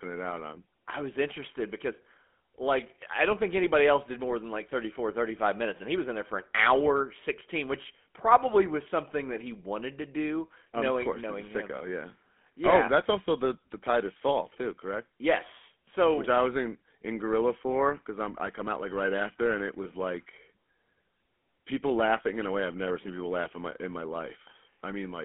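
It's a speech clip that's been through the GSM full-rate codec the whole way, with plainly audible damage. The band stops at 200 Hz and 3.4 kHz, and the pulse-driven excitation leaves that gravelly, buzzy roughness, which fits a 13 kbps stream.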